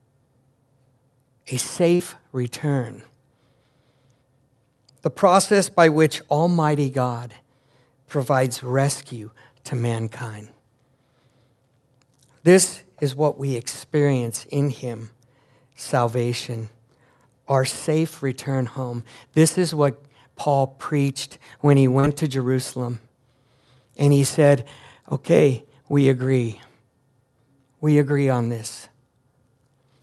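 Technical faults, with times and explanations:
1.95–2.03 s and 22.00–22.06 s (the second just after "preached when he"): short concealed packet loss. About 40 ms of audio failed to arrive in time, which fits two 20 ms packets. The decoder filled each gap by extending the preceding sound, then blended back into the real signal. This is heard as a brief smear or wobble rather than a silent hole or a hard click, which is how it differs from an unconcealed dropout or a buffer underrun.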